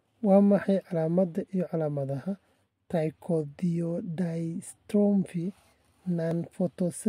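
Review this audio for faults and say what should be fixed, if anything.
There's one fault worth fixing: a block of digital silence at 6.31 s in the speech. The signal drops straight to zero for about 0.67 ms and comes straight back, with no fade on either side. At that length you don't hear a hole, just a small tick where the waveform snaps to zero and jumps back. The gap's size fits a short buffer, something like 32 samples, not being filled in time.

To prevent it, give the audio thread more headroom, with a larger buffer or less work per callback, so the output is always filled before it's due.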